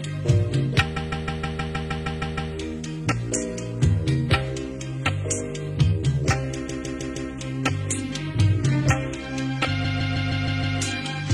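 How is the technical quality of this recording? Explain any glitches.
The recording has a stutter fault in three places. Repeated frames occur from 0.96 to 2.52 s, from 6.68 to 7.30 s, and from 9.84 to 10.78 s. In each, a block of compressed audio about 157 ms long, which fits a run of six frames, is written again and replayed: ten extra times first, then four, then six. The same fraction of a second loops, and each stretch runs about 1.57, 0.63 and 0.94 s longer than it should.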